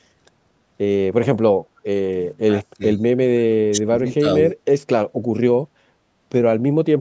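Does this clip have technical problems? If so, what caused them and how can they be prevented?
Yes. From 1.65 to 1.77 s the room background dips by about 11 dB for roughly a tenth of a second and then returns. This is background gated by the echo canceller: while the far-end loudspeaker played, the canceller pulled the microphone down hard. Gentler suppression with comfort noise would keep the background steady.

From 1.77 to 1.81 s a very faint copy of earlier sound comes back about 476 ms late. This is an echo leak, likely from a loudspeaker whose echo canceller let some of its own pickup through. Headsets, or better acoustic echo cancellation on the loudspeaker side, would prevent it.

The talker's level sinks at 2.46–3.02 s, 3.37–4.26 s and 4.42–4.56 s, by roughly 20 dB, 30 dB and 10 dB. This is speech suppressed in double talk: with both sides speaking, the canceller likely mistook the talker for echo and turned everything down. 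Headsets or a full-duplex canceller would avoid this.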